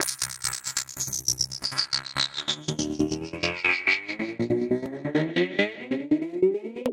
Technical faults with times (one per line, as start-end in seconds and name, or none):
4.86 block of digital silence